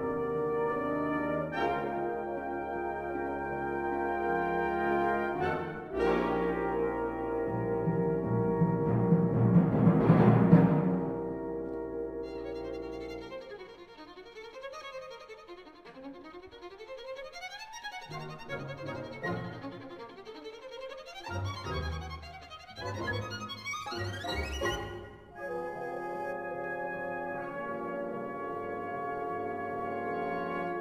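Crude rate conversion from 24.07 to 26.33 s: samples dropped without filtering, consistent with a 48 kHz to 44.1 kHz change, leave a gritty inharmonic fizz roughly 25 dB below the sound.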